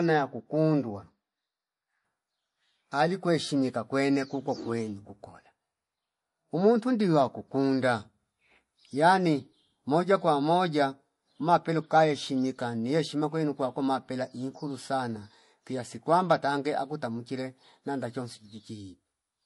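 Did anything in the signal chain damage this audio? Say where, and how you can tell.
Yes. Likely MP3 compression at the codec stage: the speech sounds watery throughout, and a spectrogram shows a hard ceiling at 11.3 kHz, where a bit-starved encoder, fitting 48 kbps, drops the treble.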